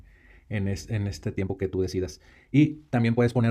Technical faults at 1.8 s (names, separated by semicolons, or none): time-stretched section